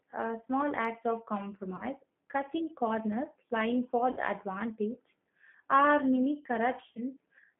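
The whole clip runs through the G.729 codec, and it's plainly audible. The speech gets squeezed into a narrow phone band, roughly 150 Hz to 3.4 kHz. At 8 kbit/s the codec rebuilds each frame from a filter, a pitch guess and a few pulses, so the voice sounds rough and slightly synthetic.

There are then three spots of VoIP packet loss concealed by the speech codec. The first is at 1.76–1.83 s, right after "uh small acts of". The second is at 4.11–4.20 s, after "cutting corners lying for". The last is at 6.92–7.01 s, after "are mini". At each one the decoder keeps stretching its last pitch and filter, turning the sound into a brief fading buzz or coloured noise. That sound covers about 30 ms of missing audio at the first and last spots and about 60 ms in the middle, which sounds like one packet, then two, then one. The audio stays weak or distorted just after each gap.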